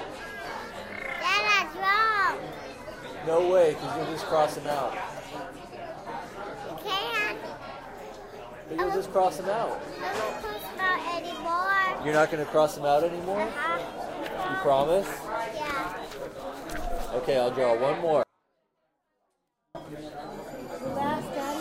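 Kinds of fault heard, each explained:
Audio dropout to a faint residue: the sound cuts off abruptly at about 18.23 s and stays gone for roughly 1.5 s, returning at about 19.75 s. It isn't a pause or a fade, since the edges are sudden, and the gap isn't silent either: a faint trace of the sound carries on underneath, something like 40 dB down. That points to the wanted signal likely being lost upstream while the path after the break stayed live, letting only that low leak through.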